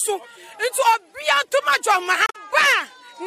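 Around 2.26 to 2.36 s there's damaged data in the compressed stream: the decoder misreads corrupted frames, loses sync, and you get a brief blip.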